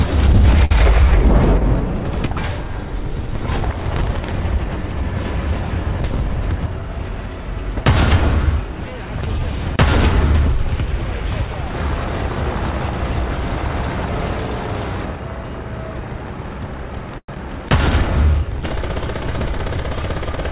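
Audio carried over a call path, band-limited with nothing above 4 kHz, which fits G.711 A-law at 64 kbps. At 0.65 s a short stall from a late packet holds the current sound for 54 ms with nothing lost. On a spectrogram this looks like a smeared, flat-lined patch with repeated harmonics, and the waveform shows a looped, slightly buzzy segment. A jitter buffer speed-up runs from 6.24 to 7.00 s at 106% and from 19.56 to 20.44 s at 104%, trimming roughly 50 ms and 40 ms of pitch periods. The pitch stays the same, and the timing of the first one feels hurried. Spectrogram events sit visibly closer together there, and the waveform shows small splice points. From 17.18 to 17.37 s the sound is stretched into a fading buzz and then about 60 ms of silence, with 60 ms missing when playback resumes. This is likely a long network dropout. It shows as a decaying smear into a blank gap, then an abrupt restart.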